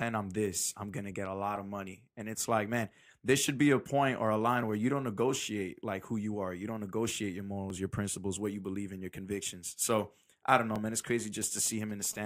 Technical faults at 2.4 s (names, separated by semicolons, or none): clock drift buffer slips